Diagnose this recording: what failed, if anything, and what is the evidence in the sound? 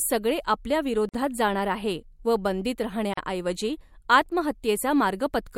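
The failure is at the codec stage: gaps at joins of encoded pieces. The speech drops to silence at 1.09–1.14 s (about 47 ms), just before "जाणार आहे व बंदीत", and again at 3.14–3.17 s (about 38 ms), just after "जाणार आहे व बंदीत", two seconds apart. The audio was encoded in separate pieces and joined untrimmed, so each join keeps encoder start-up delay plus last-frame padding. On a waveform, flat gaps have smeared edges; a spectrogram shows full-height blank columns, slightly smeared.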